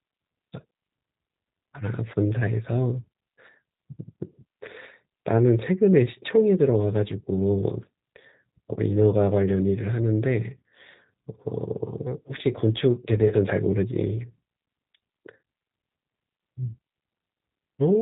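Throughout the clip the speech carries the sound of the G.729 codec, with plainly audible damage. Nothing above 4 kHz survives, and the voice has the slightly rough, synthetic texture of a signal rebuilt from a vocal tract filter, a pitch predictor and a few pulses per frame rather than from the waveform itself. That combination of band limit and coarse excitation fits G.729A running at 8 kbit/s.

At 13.28 s there is VoIP packet loss concealed by the speech codec. About 20 ms of audio went missing, consistent with a single lost packet, and the decoder filled the gap by extending its last pitch and filter settings at falling gain. The result is a brief stretched sound that fades. Because each frame depends on the previous one, the speech stays weak or distorted until about 13.34 s, well after the missing stretch ends.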